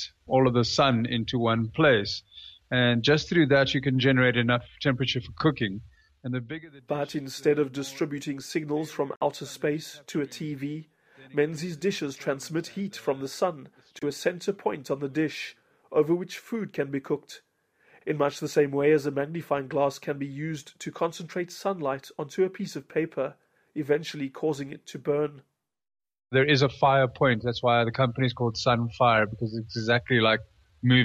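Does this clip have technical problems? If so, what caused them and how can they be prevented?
Yes. Two short bursts cut through the audio, one from 9.16 to 9.22 s peaking around -15 dBFS and a quieter one from 13.99 to 14.03 s near -20 dBFS. Each is a corrupt frame decoded: flipped bits in a couple of compressed frames gave the decoder wrong gains and codes, so it put energy at the wrong frequencies for roughly two frames' length. Checksums with error concealment, which mutes or replaces damaged frames, would prevent this.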